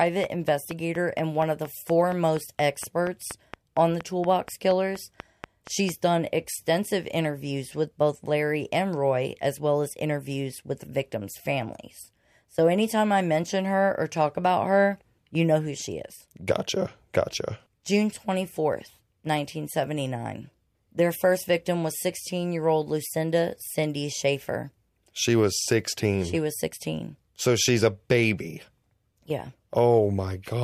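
From the start to 5.90 s, a train of clicks runs over the speech. The pulses come at a regular 4.25 per second, roughly thirty in all, about 10 dB above the speech. They tick through pauses too. Likely cause: interference, a faulty connection or power supply.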